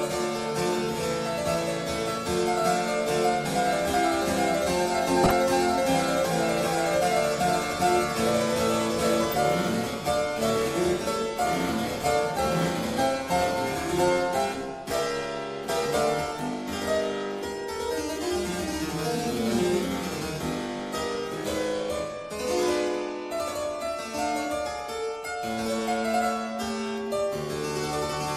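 MP2 compression runs through the whole clip: the sound is dull, with a granular, gurgling edge as upper bands drop out and flicker. The cause is likely MPEG Layer II coding starved of bits, consistent with a stream of around 80 kbps.

DAB burbling follows at 5.24–5.31 s, 9.23–9.36 s, 12.54–12.67 s and 21.11–21.18 s: short blips of noise in single sub-bands. Bit errors, a small fraction of a percent, slipped through error correction and corrupted what sounds like a handful of frames each time.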